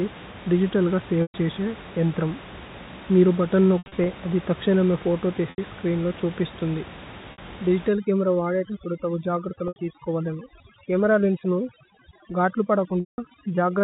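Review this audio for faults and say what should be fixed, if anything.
Packet loss with pitch repetition: packets went missing and the receiver filled each gap by repeating the last pitch period. Short gaps sound like a held, buzzy tone, and longer ones fade to silence before speech cross-fades back in. This happens at 1.22 s (120 ms, just before "ഛേസിയു ഏന്ത്രമു"), 3.78 to 4.06 s (160 ms lost in bursts, longest 80 ms), 5.5 s (80 ms, between "അദി തക്ശേനമേ ഫോതോ" and "സ്ച്രീന്ലോ ഛുപിസ്തുന്ദി"), 7.32 s (60 ms, after "സ്ച്രീന്ലോ ഛുപിസ്തുന്ദി"), 9.68 s (80 ms) and 13.0 s (180 ms). To prevent it, stabilise the network path and enlarge the jitter buffer or add forward error correction.

Overdone noise removal: from 7.89 s to the end, a noise reduction stage set too aggressively shuts off bands near its noise estimate. That leaves the background near-silent with twinkling specks. To prevent it, lower the suppression strength, since the room noise sits only about 17 dB below the speech and needs gentle treatment.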